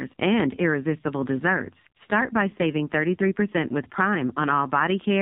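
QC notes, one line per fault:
throughout: AMR narrowband mobile codec. Nothing above 4 kHz survives, and the speech has a buzzy, synthetic edge. That heavy damage points to a low AMR-NB mode near 5.9 kbps. A plain low-pass filter would dull the sound without this vocoder-like texture.
2.50–2.54 s: lost AMR speech frames. For about 20 ms the speech dips and warbles, which fits a single lost frame. The decoder repeated its last pitch and vocal tract settings at reduced gain. Unlike a dropout, there is no hard silent gap, only a smeared, concealed blip.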